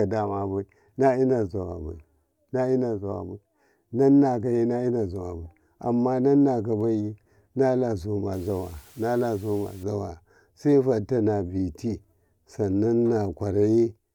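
From 8.33 to 9.83 s the speech drops to low bit depth with dither, consistent with about 8 bits, with noise added before rounding. It sounds like an even, steady hiss roughly 30 dB below the speech, unlike the gritty distortion of undithered quantization.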